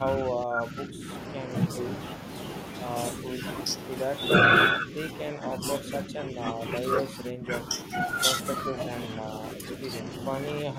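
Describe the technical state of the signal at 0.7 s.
At 0.7 s the speech sits inside a stretch of speech suppressed in double talk, running from 0.00 to 1.48 s. The level dips, at its deepest by about 10 dB, and the high end thins or breaks into pieces, affecting around a second in total. The likely cause is an echo canceller that heard both sides at once and turned everything down. Unlike packet loss, the sound isn't replaced by repeats but attenuated, dulled or cut out in bursts.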